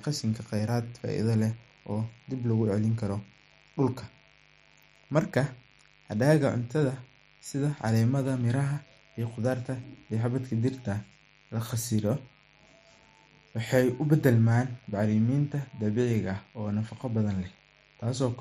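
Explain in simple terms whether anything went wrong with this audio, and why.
There's a mains buzz running under the speech from start to finish. It's a steady, raspy hum at 50 Hz plus its harmonics, coming from electrical interference leaking in from nearby power wiring or equipment. It sits fairly quietly beneath the speech but never goes away.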